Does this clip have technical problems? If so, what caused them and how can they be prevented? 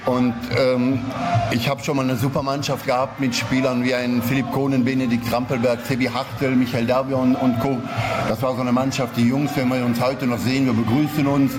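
Yes. Gain pumping runs throughout, with the gain swinging by around 15 dB, leaving the dynamics squashed. The likely cause is input gain set far too high, with a fast limiter clamping every peak. Prevent it by lowering the microphone gain and easing the limiter's threshold and release.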